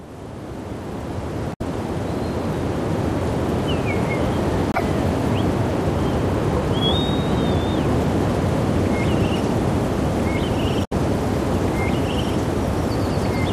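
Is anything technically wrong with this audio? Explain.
Yes. Damaged data in a compressed stream breaks the sound at 1.50–1.61 s, 4.72–4.82 s and 10.84–10.93 s. Corrupted bytes make the decoder misread frames and lose sync, producing brief glitches.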